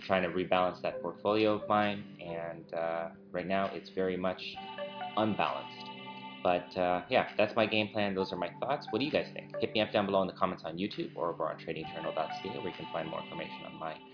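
No technical faults can be heard anywhere in the clip. The audio runs without dropouts, clicks or interruptions from beginning to end.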